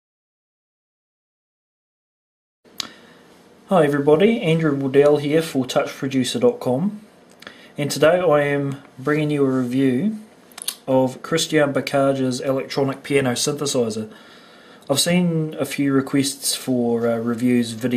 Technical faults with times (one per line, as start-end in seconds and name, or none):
none